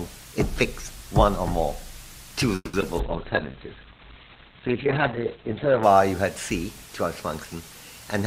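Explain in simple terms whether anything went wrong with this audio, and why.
Yes, a few things went wrong here, all bunched into the middle of the clip.

From 2.55 to 2.75 s there's a call audio freeze. The last bit of sound gets stretched into a fading buzz that ends in a short silence. This was likely packets getting stuck on the way, so the receiver had nothing new to play and improvised. Once they arrived, playback picked up where it left off. Nothing is actually missing, but everything after that point runs about 0.18 s late.

Right after that come two spots of short concealed packet loss, at about 2.81 s and again at about 2.96 s. Each time, a few hundredths of a second never arrived in time. The receiver briefly carried the previous sound forward and blended back in, so you hear a quick smear or wobble, and a tiny slice of the real audio is gone.

Then from 3.0 s to about 5.9 s there's a call bitrate drop. 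The connection told the encoder to squeeze the audio down hard, and it stayed at its worst for roughly 2.8 s. The sound goes rough and muffled because everything above about 4 kHz is cut off, where it normally reaches 20 kHz. It clears up once the rate recovers.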